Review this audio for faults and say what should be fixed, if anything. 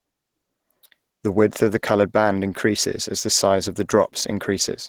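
Opus compression, likely at a low bitrate, runs through the whole clip. The damage is plainly audible and points to something near 16 kbps, which pushes the encoder out of its music mode into its hybrid speech mode. That mode spends its few bits on the core of the voice and approximates the rest, so the speech sounds muffled and hoarse from start to finish, with a grainy roughness where finer detail should be. To prevent it, encode at a higher bitrate or keep a less compressed master.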